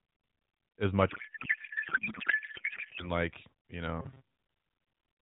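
From 1.1 to 3.1 s the speech gives way to a codec payload misread. The AMR frames appear to be octet-aligned but are being decoded as bandwidth-efficient, so every field lands in the wrong place. What comes out is garbled noise and warble that barely tracks the speech. On a spectrogram the harmonic striations disappear into a smeared texture, still capped near 4 kHz by the narrowband codec.

Between 4.01 and 4.35 s the sound turns to a rigid, metallic robotic buzz at 134 Hz. This is likely caused by repeated short buffers: a segment of about 7.5 ms is looped while most of the real audio in that stretch is skipped. The waveform shows identical cycles repeating, and the spectrogram shows a fixed comb of 134 Hz harmonics in place of the moving pitch.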